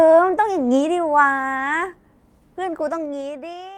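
It's a short speech clip, and from 2.86 s to the end there's zipper noise as the level drops by roughly 25 dB. The fade runs in 2 dB steps, around fifteen a second, with no smoothing, so each jump ticks audibly on top of the speech.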